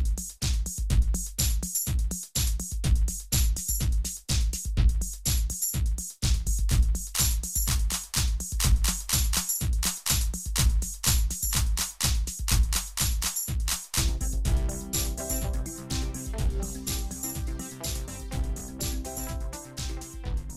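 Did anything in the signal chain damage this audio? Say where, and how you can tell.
Yes: chunks out of order at 18.58 to 18.61 s, a problem in the driver or buffer stage. A 10 ms block of audio was written two blocks late, so it plays after the two blocks that should follow it. Nothing is missing from those 30 ms, but the sequence is scrambled, giving a brief jumbled flutter with three hard joins where the waveform no longer lines up.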